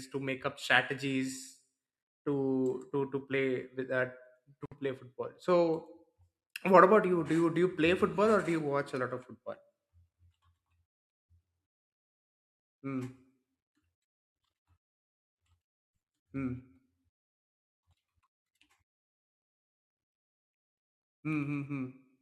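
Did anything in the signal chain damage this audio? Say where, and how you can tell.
Yes. A gap at a join of encoded pieces, a codec-stage fault, cuts the speech at 4.66 to 4.72 s, between "with that to" and "play football", and again at 16.20 to 16.26 s. The gaps last 58.6 ms and 57.6 ms, with smeared edges that leave the truly silent part shorter. Separately encoded segments were joined untrimmed, leaving encoder start delay and final-frame padding in place.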